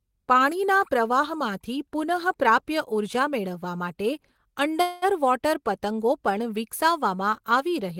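At 4.81 s the speech stalls in a call audio freeze lasting until 5.05 s. For about 206 ms the last sound is stretched into a fading buzz or hiss rather than going silent. The likely cause is packets delayed in transit, leaving the jitter buffer empty so the receiver had to fill the gap. When the audio resumes, it picks up exactly where it stopped. Nothing is lost, but everything after runs about 206 ms late.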